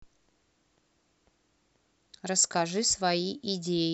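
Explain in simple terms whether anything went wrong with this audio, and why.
Nothing went wrong with this audio, because there is no moment where the speech sounds faulty or damaged.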